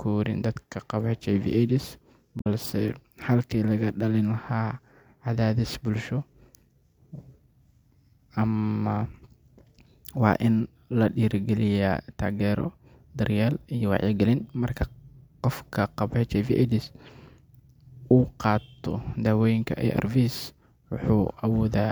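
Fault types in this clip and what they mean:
Damaged data in a compressed stream: a brief glitch breaks into the speech from about 2.37 to 2.47 s, roughly a tenth of a second. Corrupted bytes there make the decoder misread its frames, lose sync and skip ahead to the next valid header.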